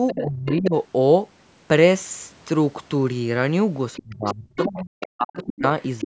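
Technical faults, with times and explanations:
0.07–0.56 s, 3.94–5.43 s and 5.81–6.04 s, other side's voice leaking through: a second voice sits under the main talker, roughly 10 dB quieter. It is likely loudspeaker playback that the echo canceller failed to fully remove from the microphone. On a spectrogram, a faint second set of harmonic striations overlaps the main speech, still stopping at the 8 kHz ceiling of the call path.
0.14–0.74 s, 4.03–5.63 s and 6.03–6.1 s, speech suppressed in double talk: while the leaked voice is present, the main talker dips hard, by a good 20 dB early on and around 40 dB later, totalling roughly half a second, then one and a half seconds, then a brief cut at the very end. Both sides were active at once, so the echo canceller likely attenuated everything. The waveform shows sudden envelope collapses, and the spectrogram shows harmonics thinning or vanishing in blocks.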